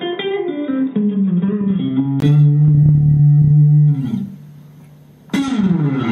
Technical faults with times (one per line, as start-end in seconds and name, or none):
0.00-2.22 input switched to a poorer device